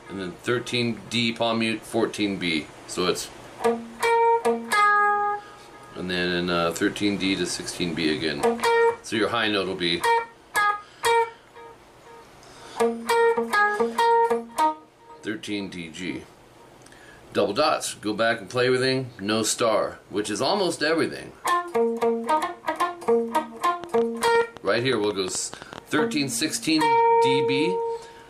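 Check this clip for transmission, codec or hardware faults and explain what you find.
One fault stands out, a train of clicks from 23.84 s to 25.79 s. About twenty sharp, similarly shaped pulses arrive at roughly 9.8 per second but unevenly spaced, peaking about 5 dB above the surrounding sound, so they tick through quiet moments too. The likely cause is an external pulse source, such as nearby equipment or a faulty connection or power supply, injecting energy repeatedly. Their uniform shape and sustained burst set them apart from random crackle or a single dropout pop.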